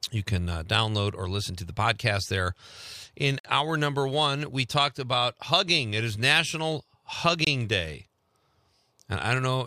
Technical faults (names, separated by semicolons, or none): gap between stream segments